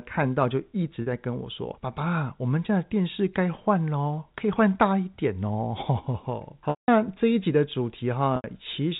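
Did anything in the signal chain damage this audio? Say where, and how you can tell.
Yes. A buzzy, held tone fills about 40 ms at 1.02 s. At 6.70 s and 8.36 s, 180 ms and 80 ms fade to silence before speech cross-fades back. This is network packet loss with pitch repetition: the receiver loops the last pitch period, then fades it.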